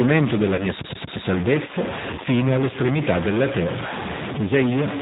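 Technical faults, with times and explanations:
Throughout, stuck bit: Distortion rides on the speech, and the pauses fill with a gritty noise instead of falling silent. The likely cause is one data bit held at a fixed value, shifting roughly half the samples by that bit's weight and flipping around zero in quiet passages.
Throughout, G.729 codec (G.729A at 8 kbit/s): Codec damage is plainly audible. Nothing above 4 kHz survives, so the speech sounds dull and band-limited. A rough, slightly synthetic quality comes from the decoder rebuilding each 10 ms frame from a vocal tract filter, a pitch predictor and a few pulses.
0.55 to 0.65 s and 2.15 to 2.21 s, VoIP packet loss concealed by the speech codec: Each gap fits one lost 30 ms packet. The decoder extended its last pitch and filter with falling gain, smearing the sound into a fading buzzy tone or coloured noise. Because each frame builds on the previous one, the weakened, distorted sound persists past the loss itself.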